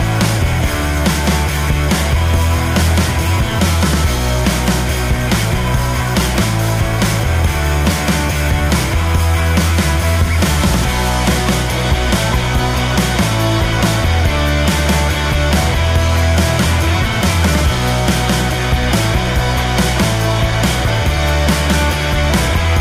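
No technical faults can be heard anywhere in the clip. There is nothing here to place on a timeline.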